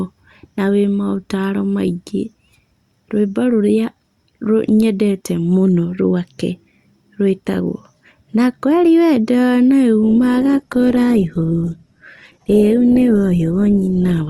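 At 10.03 s the speech switches abruptly, without a gap, to an adaptive stream at a lower bitrate, consistent with a drop from 64 to 16 kbit/s Opus: nothing above 12.3 kHz remains, and codec artefacts rise to 14.3 s.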